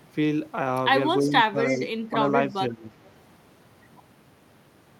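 From 1.19 to 1.32 s an echo leak is heard. A faint copy of the speech trails 328 ms behind at about 20 dB down, likely loudspeaker pickup that the far end's echo canceller failed to remove. The same delayed copy returns at 1.59 to 1.88 s at about 20 dB down, at 2.04 to 2.09 s at about 25 dB down, and at 2.5 to 2.55 s at about 35 dB down.

Alongside these, speech suppressed in double talk pulls the main speech down while both sides' sound overlaps. The level drops by around 10 dB at 1.2 to 1.32 s and by around 15 dB at 1.51 to 1.81 s. A brief dip follows at 2.1 to 2.14 s, and an uneven stretch of dips runs through 2.54 to 3.0 s. This is likely the canceller attenuating everything when it cannot tell the talker from the echo.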